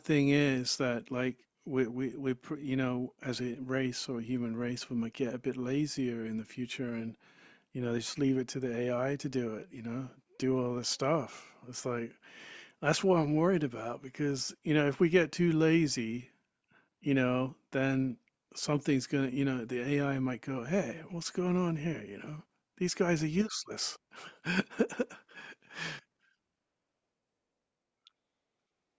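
No technical faults are audible.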